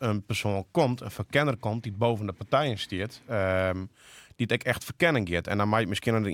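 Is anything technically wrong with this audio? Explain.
No, nothing technically wrong turns up anywhere in this speech recording.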